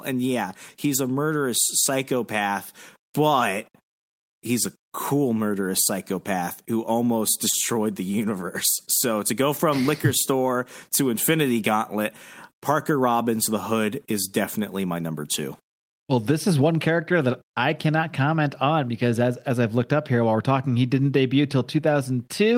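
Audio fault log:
No technical faults can be heard in this speech.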